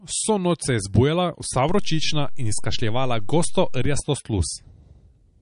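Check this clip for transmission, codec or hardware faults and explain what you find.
Two faults are present in this speech clip.

Throughout, the speech sounds watery and swirly, with no content above 10.6 kHz. This is likely MP3 compression: a starved encoder, consistent with roughly 40 kbps, cuts the treble and drops weak detail.

At 1.69 s a low thump marks a DC step, where the waveform's zero line jumps to an offset. It holds until a second thump at 4.0 s, when it steps back.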